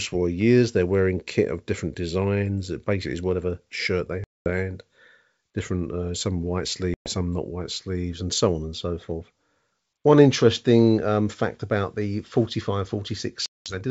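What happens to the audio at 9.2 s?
Nothing goes wrong at 9.2 s: the speech there carries on intact through the G.722 wideband telephone coding at 64 kbit/s, with no break, dropout or added noise at that moment.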